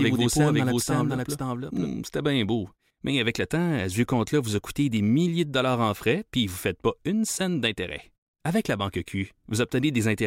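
A likely second, slower capture path mixes in a doubled audio track, already under way at 0 s: a clean copy follows about half a second behind, a few dB quieter, and stops abruptly at 1.88 s, just before "c'était bien beau".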